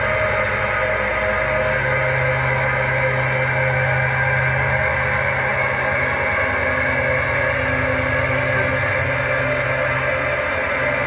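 No technical faults can be heard anywhere in the clip, so there is nothing to place in time order.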